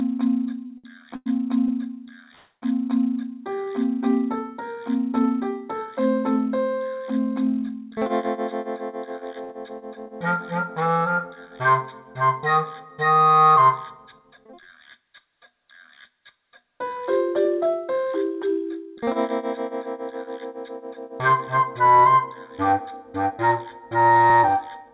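Throughout the clip, a channel delay of roughly 0.2 ms, summed to mono, causes comb filtering: the sound is thin and hollow, and a spectrogram shows a fixed dark notch near 3 kHz. The band stops at 4 kHz, which points to a narrowband G.711-type call codec.

From 0.66 to 1.71 s come repeated stalls (stutter). Packets arrived late, the jitter buffer kept running dry, and four gaps totalling 210 ms were filled, the longest 102 ms. The audio drags and hiccups. The waveform shows smeared, repeated stretches, and the spectrogram shows horizontally stretched streaks.

From 2.35 to 2.64 s there is a call audio freeze, likely from packets held up in transit. 271 ms was filled: the last sound is continued as a fading buzz, ending in about 40 ms of silence. On the waveform this appears as a decaying envelope, then a flat line, before the audio resumes where it left off.

At 9.44 s there is a short stall from a late packet. 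The receiver stretched the last sound by 57 ms until the packet came in, so a sound is held slightly too long, with a faint buzz. The spectrogram shows a brief smear of held harmonics.

Jitter buffer speed-ups occur at 13.72 to 14.45 s (109%, roughly 70 ms removed), 17.34 to 18.06 s (106%, roughly 50 ms) and 23.16 to 24.70 s (109%, roughly 150 ms). Short pitch-period slices were cut to shrink the buffer delay, so these stretches sound hurried at unchanged pitch. Spectrogram events there sit compressed in time.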